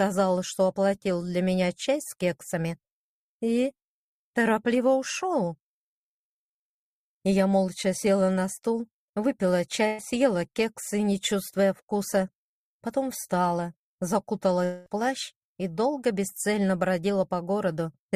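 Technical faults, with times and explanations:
9.87–10.01 s, burst of packet loss: 120 ms of packets arrived too late or not at all. The receiver stretched the last sound into a fading 111 ms fill, then resumed further on.
14.65–14.88 s, long network dropout: the stream likely stalled, losing 220 ms of audio. A fading 212 ms continuation of the last sound covers the gap before the audio returns further on.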